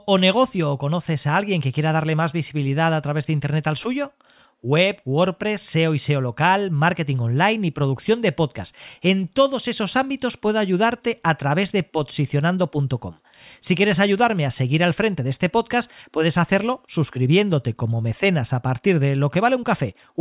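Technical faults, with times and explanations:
No technical faults can be heard anywhere in the recording, and the signal stays steady and intact throughout.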